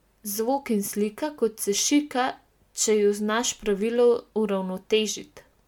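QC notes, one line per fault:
Throughout, generation loss: the speech was likely decoded and re-encoded as MP3 at 128 kbit/s around seven times. Each pass requantises on a shifted frame grid, so swirly, hollow smearing and blurred attacks build up. Nothing sounds above 19.9 kHz.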